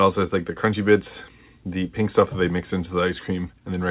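No technical faults turn up anywhere in the clip, so there is nothing to place in time order; the call path's cut-off above 4 kHz is simply how this phone-band audio normally sounds.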